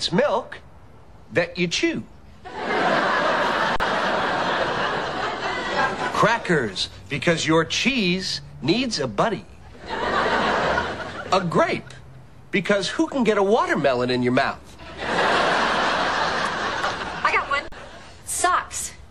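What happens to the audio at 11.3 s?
Nothing goes wrong at 11.3 s; the audio plays through that moment intact, with no dropout, click or other fault.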